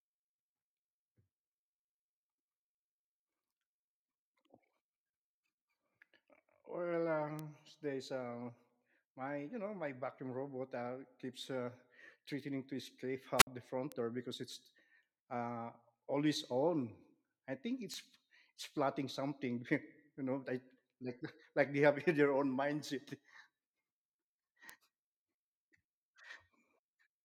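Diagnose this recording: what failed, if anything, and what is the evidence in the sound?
Four bit error spikes come from a digital stage, a storage or transfer path, not the analogue chain. Each is a single-sample tick peaking around -23 dBFS, at 7.39 s (just before "there's um"), 13.92 s (just before "door because it's uh"), 17.94 s (just after "I think") and 24.70 s. A flipped bit throws one sample off by a power of two, so the click is broadband and unrelated to the signal. A converter or buffer glitch would instead leave a gap or a repeated block.

A wireless microphone squelch dropout sits at 13.37 to 13.47 s, on the analogue radio link ahead of the converter. The FM carrier fades, hiss swells briefly, then the receiver's squelch mutes the output for about 56 ms before the audio comes back. Packet loss in a network or codec stage would cut out cleanly or smear into concealment, without that rising static on the way in.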